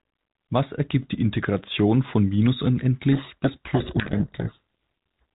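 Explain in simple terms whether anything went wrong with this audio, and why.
Something did go wrong here. Right after "von minus", at 3.12 s, the speech is buried in harsh, grinding distortion until 5.19 s. This is a codec payload misread. The receiving end unpacked the compressed telephone audio with its bits in the wrong order, so it decoded garbage.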